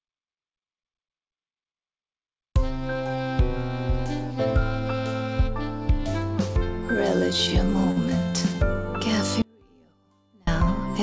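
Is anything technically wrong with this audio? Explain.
Yes, there are two faults. The audio passed through a call codec that stops everything above 8 kHz.

At 7.91 to 7.99 s there is a short stall from a late packet. The jitter buffer ran dry, so the receiver held the last sound for about 55 ms until the packet arrived. Nothing is lost, but that moment drags slightly, with a slight buzz or dip, and everything after it runs 55 ms later.

From 9.42 to 10.47 s there is an audio dropout to a faint residue. The wanted signal was likely lost upstream while the path after the break stayed live. The sound cuts off abruptly for about 1.05 s, leaving only a faint trace roughly 35 dB below normal level, then returns just as suddenly.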